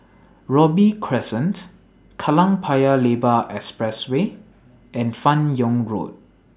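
No technical faults can be heard anywhere in the recording; the signal stays continuous and intact throughout.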